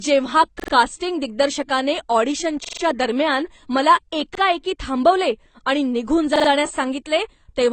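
From the start and all the way through, this speech is dull, with nothing above about 8.6 kHz and a smeary, plainly fizzy edge on sibilants. That's likely AAC compression at a low bitrate, where the encoder trims the top band and starves the rest of bits.

On top of that there are four repeated-buffer stutters, where playback ran dry and the device replayed its last chunk. Each chunk lasts about 43 ms, which fits a 2048-sample buffer. They fall at 0.60 to 0.73 s, just before "कास्टिंग दिग्दर्शकाने"; 2.65 to 2.82 s; 4.35 to 4.40 s, just before "थांबवले आणि निघून"; and 6.36 to 6.49 s, right after it. Each one is a short stutter with a hard join at each repeat.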